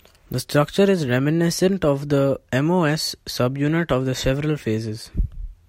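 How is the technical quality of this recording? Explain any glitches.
Nothing here sounds off: the speech comes across steady and intact, with no glitches to point out.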